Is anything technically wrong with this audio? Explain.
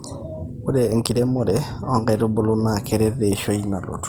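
Yes. Opus compression damage runs through the whole speech clip. The sound is plainly rough and grainy, with a noisy texture where detail should be clean. The likely cause is Opus in its CELT music mode. That mode keeps each band's energy but fills starved bands with folded or noise content. This trades holes for grit. The spectrum still reaches about 20.2 kHz, so the bandwidth was not cut. The damage fits a low rate near 24 kbps.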